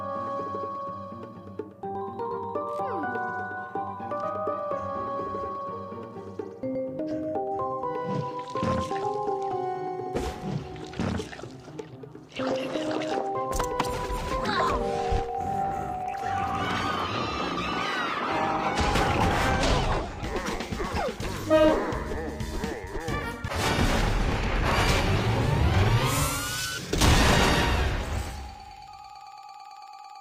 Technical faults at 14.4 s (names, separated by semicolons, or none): none